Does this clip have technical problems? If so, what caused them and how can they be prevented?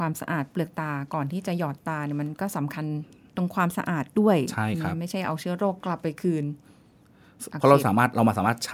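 No, nothing stood out as a technical problem on listening to this speech recording, so there is nothing here to trace to a cause or guard against.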